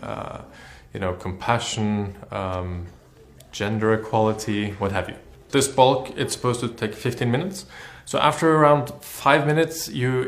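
No technical faults are audible anywhere in this audio.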